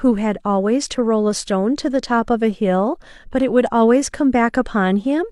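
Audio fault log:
No technical faults can be heard anywhere in the speech recording.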